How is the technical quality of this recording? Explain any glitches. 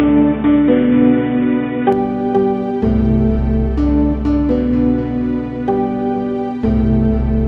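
The recording has one clear glitch at the very start. From 0.00 to 1.93 s the sound is band-limited, with nothing above 3.8 kHz, so it comes across dull and boxy before opening up abruptly to full bandwidth. This is likely an input switched to a poorer device, such as a secondary microphone or a headset's call profile, before the main input took over. The level stays about the same across the change, and there is no silence at the switch. What separates this from a simple low-pass filter or codec bandwidth drop is that the character changes along with the bandwidth. The narrow section has its own tone and a faint background noise floor of its own, roughly 45 dB below the signal, rather than being the same source with only the top trimmed off.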